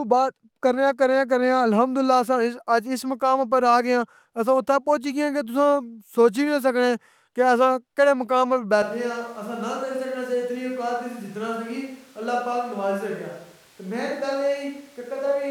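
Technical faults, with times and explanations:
8.82 s onward, switch to a distant microphone: after "اسساں کیژے مقام اپر" speech turns hollow, likely a farther microphone; waveform shrinks about 5 dB, spectrogram loses bass, noise floor rises.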